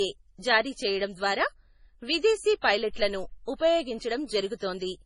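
A starved lossy encoder, likely MP3 compression, has damaged the whole speech clip heavily. Short of bits, it has discarded everything above about 10.5 kHz and zeroed quieter frequency lines frame by frame. The result is dull, watery, swirling audio with metallic chirps on sibilants, which fits a very low bitrate around 24 kbps.

The same transform codec causes pre-echo, spreading quantisation noise meant for a sharp onset back across the silence just before it. At 0.40 s a 34 ms smear of hiss arrives ahead of "జారీ చేయడం ద్వారా". The same thing happens at 2.61 s (34 ms), 3.56 s (44 ms) and 4.55 s (57 ms). Each time a brief hiss precedes the onset, and the attack sounds softened and blurred.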